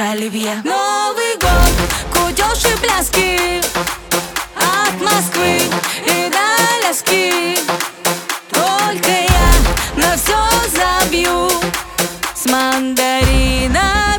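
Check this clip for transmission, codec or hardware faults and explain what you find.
Integer overflow cracks appear at 1.63 to 1.67 s, 2.66 s, 4.63 s, 7.31 s, 9.04 to 9.54 s and 10.53 s. Loud peaks barely reach full scale, yet they wrap to the opposite sign instead of being limited. Each gives a violent crack, far harsher than clipping.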